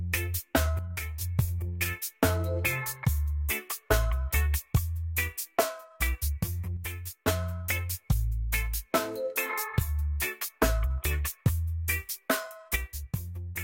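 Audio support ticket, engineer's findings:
Abrupt level dips of about 6 dB at 0.79–1.21 s, 6.77–7.28 s and 12.76 s to end. Likely one channel drops out: one stereo side goes silent, so the mono sum loses half its shared content and anything only on that side vanishes.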